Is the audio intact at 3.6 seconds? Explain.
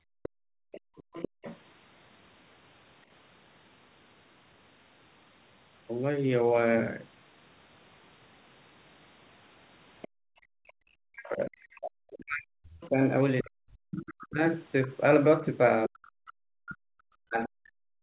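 Yes, the speech at 3.6 seconds is intact, with nothing beyond the narrow, telephone-like band of the call path, which carries nothing above about 4 kHz.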